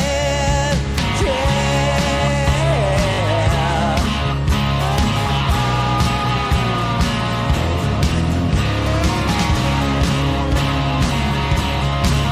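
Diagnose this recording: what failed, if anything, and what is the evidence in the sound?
At 3.14 to 3.19 s a short slice of the audio repeats as a brief buzzy stutter, and the sound then resumes further on. This is Bluetooth stutter on the wireless link: about 40 ms went missing, which fits two lost packets, and the receiver replayed its last buffer to fill the gap.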